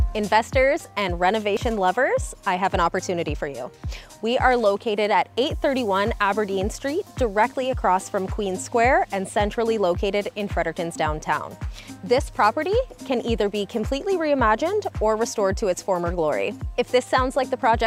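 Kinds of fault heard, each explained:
USB whine: current drawn in 125-microsecond USB microframes leaks in through power or ground, giving a steady 8 kHz tone, strongest at 16 kHz, from 8.25 s onward, about 40 dB below the signal. A spectrogram shows flat horizontal lines at both frequencies.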